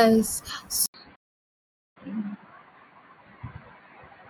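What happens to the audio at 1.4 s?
At 1.4 s the speech has gone silent because of a playback stall running from 1.15 s to 1.97 s. The output drops out for about 0.80 s and then resumes. The likely cause is the player running out of buffered data or its thread being blocked, so nothing reached the output until it recovered. On a waveform this is a flat line across the whole span. On a spectrogram it is a blank vertical band with no energy at any frequency.

The same moment also falls within an input switched to a poorer device, which begins at 0.86 s and lasts to the end. The likely cause is the recording input changing to a narrower-band microphone or headset profile. From that point the speech sounds duller and boxier, while the level stays about the same and a faint new noise floor sits well below the speech. A spectrogram shows the upper band abruptly emptying after an 80 ms gap at 0.86 s. 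The waveform shows that short gap but keeps a similar amplitude.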